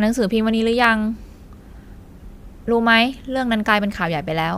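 At about 0.84 s there's a single sharp click, and it sounds like dropped samples. What's likely going on is that a tiny slice of the stream, a fraction of a millisecond, went missing, so the waveform leaps straight from one value to a later one instead of moving smoothly. Nothing audible is lost from the speech itself; you just get that one crisp tick, which would show up as a thin vertical line across the spectrum.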